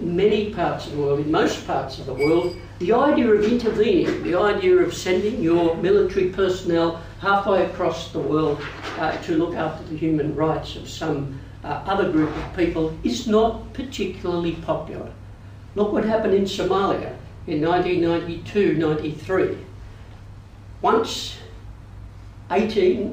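Right from the start and all the way through, there's imaging from linear upsampling. It sounds like the audio was brought up from around 22 kHz to 48 kHz by straight-line interpolation. The top end is dulled, and a faint mirrored copy, roughly 40 dB down, sits between about 11.03 and 22.05 kHz, adding a light metallic shimmer to bright, hissy sounds.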